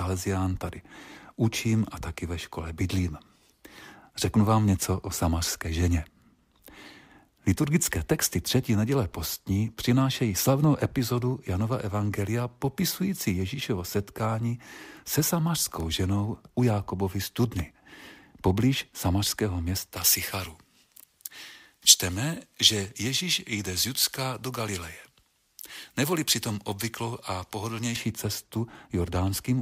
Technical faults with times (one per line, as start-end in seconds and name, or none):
19.96-27.96 pre-emphasis left on